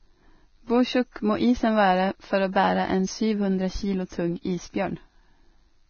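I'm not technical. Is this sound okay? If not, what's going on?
No. Throughout the speech there is Vorbis compression, likely from heavy low-quality encoding. Everything above 6.5 kHz is gone, so the speech sounds dull, and the fine detail below that has turned into a grainy hiss that roughens the sound and blurs sharp consonants.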